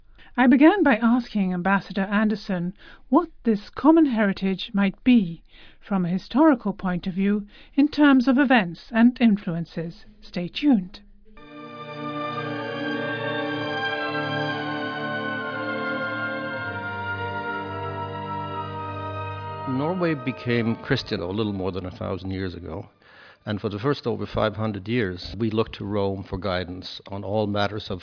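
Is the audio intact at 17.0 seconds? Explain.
Yes, the audio is intact at 17.0 seconds, with no fault present at that moment.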